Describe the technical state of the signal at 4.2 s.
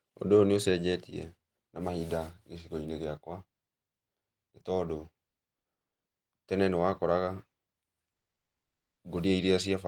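At 4.2 s the speech signal is intact, with no audible fault at that moment.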